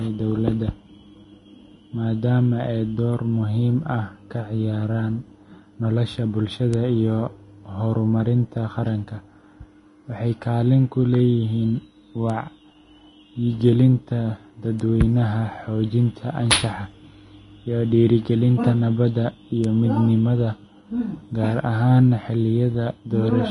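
Across the whole speech clip, the treble is grainy and hissy, tones are roughened and consonant attacks are smeared, and nothing sounds above 10.6 kHz. This is likely Vorbis compression at a low bitrate, around 30 kbps. Unlike steady background hiss, the graininess follows the signal and moves with it.

At 6.74, 12.30, 14.80 and 19.64 s there are bit error spikes, each a single sharp tick with no decay. One sample jumps by a power of two and snaps back; at 19.64 s two consecutive samples are affected. Unlike a dropout click or a splice, nothing is lost around it.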